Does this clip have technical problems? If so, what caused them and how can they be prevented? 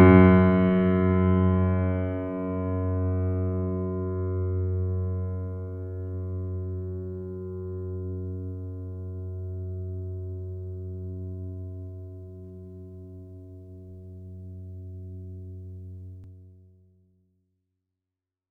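Yes. At 16.24 s, a dropped buffer (overrun) is the likely cause: the recording software fell behind, hardware overwrote a few milliseconds of music, and the two sides were joined, giving a small jump in the sound early in the closing fade-out. A larger buffer or higher recording-process priority would prevent it.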